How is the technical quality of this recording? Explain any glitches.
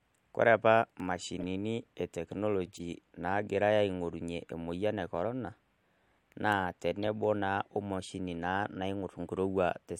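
Three short glitches interrupt the speech, all of the same kind: corrupt frame decoded. They occur at 1.39 to 1.43 s, at 2.66 to 2.80 s, and at about 7.03 s. In each, damaged bits in a compressed frame were decoded as if valid, so misread codes and gains placed energy at frequencies where none belongs. Each is a brief chirpy blip or noise burst peaking around -30 to -35 dBFS, and the longer 2.7 s event points to several consecutive frames. Unlike a dropout or concealed loss, nothing smears; foreign sound is added instead.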